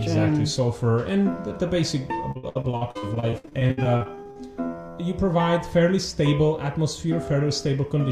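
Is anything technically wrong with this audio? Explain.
Yes. Repeated packet loss (robotic sound) affects the music from 2.31 to 4.37 s. Around two dozen short dropouts, the longest 63 ms, are each patched by extending the preceding sound. About 35% of that stretch is filled-in audio, so it sounds choppy, with pieces missing.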